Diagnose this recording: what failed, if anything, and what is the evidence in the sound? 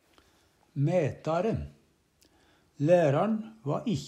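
Nothing failed; no faults heard.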